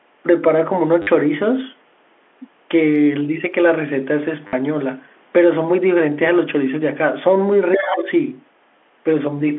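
At 1.02 s the speech stutters for 50 ms, until 1.07 s. This is packet loss with the last packet repeated. Audio went missing, and the receiver filled the gap by replaying its most recent packet. Each copy joins the next out of step with the pitch. The run buzzes at a steady rate. That rate fits 10 ms packets, giving a buzz near 100 Hz. The effect is a brief robotic stutter.

The same fault returns at 4.47 s and lasts 60 ms, to 4.53 s. This gap is slightly longer, so the repeated segment loops a little more.

From 7.73 s to 8.11 s a second voice can be heard beneath the talker. It sits about 10 dB below the main speech. It sounds like the other side's voice leaking through. The likely cause is the far end's audio playing from a loudspeaker and reaching the microphone. The echo canceller did not fully remove it.

Over nearly the same span, 7.77 s to 8.10 s, the talker's own voice dips. This is most likely speech suppressed in double talk. 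Both sides were talking at once. The echo canceller could not separate the near talker from the loudspeaker echo, so it turned the whole signal down. The deepest drop is around 10 dB. Roughly 300 ms is affected. The voice sounds pulled back while the leaked voice plays.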